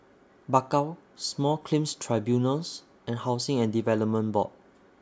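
No technical faults are audible.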